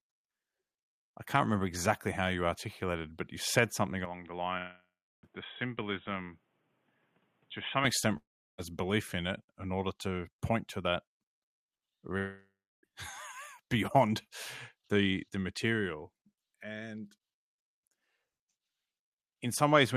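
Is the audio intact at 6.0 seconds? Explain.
No. From 4.05 to 7.84 s the speech turns dull and boxy, with nothing above 3.8 kHz. It drops a few decibels and gains faint new background noise. There is no gap at either switch. The likely cause is an input switched to a poorer device.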